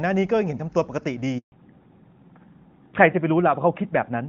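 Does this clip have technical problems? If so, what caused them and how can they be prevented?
Yes. At 1.38 s the speech cuts out abruptly and stays silent for 140 ms until 1.52 s. This is a handover gap: no speech frames arrived while the call switched networks. Smoother handovers with frame buffering or packet-loss concealment would prevent it.

From 1.52 s to the end, the speech turns duller and rougher, with nothing above 4 kHz. This is a fallback to narrowband, in which the call moved from HD Voice, fitting AMR-WB at about 23.85 kbit/s, to the older AMR-NB codec, fitting about 12.2 kbit/s. Keeping both networks HD Voice capable would prevent this drop.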